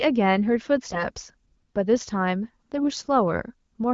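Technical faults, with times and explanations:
0.92–1.04 s and 2.77–2.86 s, AMR bit errors: two short bursts where the sound goes hoarse, scratchy and a bit gargly while pitch and level roughly hold. The weakly protected bits in the AMR-WB frames got flipped, so the excitation pulses land in the wrong spots and the fine pitch, gain and spectral values drift. The first burst sounds rougher, which suggests something like one bit in ten gone bad. The second sounds more like one in twenty, and each spans about five or six 20 ms frames.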